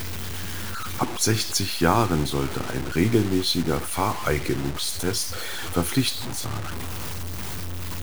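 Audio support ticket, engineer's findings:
Grainy, gritty distortion tracking the speech throughout, quiet tails sputtering to silence; noise only about 10 dB down. Likely low bit depth without dither: 5-bit truncation.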